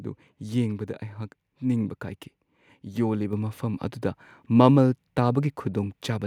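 At 3.33 s the microphone volume is stepped up by about 5 dB in a single jump, just before "ꯃꯐꯝ ꯑꯗꯨꯗ". The background noise rises with the speech at the same instant, so this is a device input change rather than the talker getting louder or a gradual gain ride.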